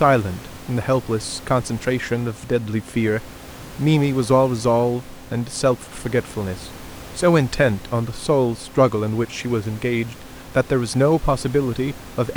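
The speech comes through with no technical faults, with only the background noise of the room sitting about 19 dB beneath it.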